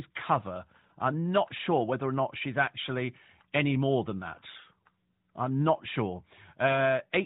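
Speech, carried over an AMR narrowband mobile link that caps the band at 4 kHz with only light coding character, consistent with the 12.2 kbps mode; nothing faulty to report.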